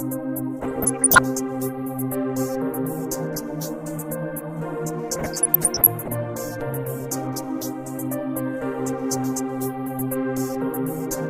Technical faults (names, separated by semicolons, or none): DAB burbling